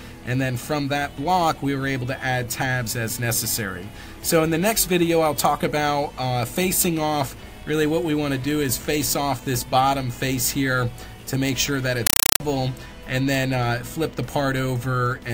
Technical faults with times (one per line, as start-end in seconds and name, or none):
12.07-12.40 compressed stream played as audio